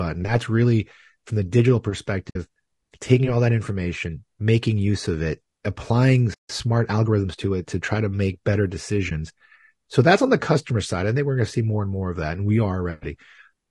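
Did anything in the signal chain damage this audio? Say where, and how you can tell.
Yes. Codec stage: speech across the whole clip has the rough, grainy texture of low-delay AAC compression, most likely AAC-ELD at a bitrate near 32 kbps. At this low bitrate too few bits are left for the pitch harmonics, so noise fills the gaps between them and the top band sounds thin and synthetic. On a spectrogram the harmonic stripes look smeared, with a speckled floor between them and a weak, patchy band at the top.

Network and decoder stage: AAC frame loss with muting shows up as two soft holes, 2.29 to 2.36 s and 9.09 to 9.12 s, the second just after "to make better". The first is long enough to fit three lost 20 ms frames, the second one. The decoder zeroed the missing spectra, and the overlapping windows fade the sound down and back up. The waveform shows brief tapered gaps. The spectrogram shows narrow blank columns.

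Playback stage: right after "use of it applying" the sound stops dead from 6.34 to 6.49 s, a 152 ms playback stall, most likely from the player's buffer running empty. On the waveform this is a flat-line segment with abrupt edges. On the spectrogram it is a clean vertical gap across all frequencies, wider than the codec holes.

Playback stage, recovery: from 6.49 to 8.01 s, leading up to "to make better", the speech runs about 1.1 times fast at unchanged pitch. This is time-compressed catch-up: the player drains its backlog by cutting out short slices and cross-fading across the joins. On the spectrogram, syllables look compressed in time while the harmonic spacing stays put.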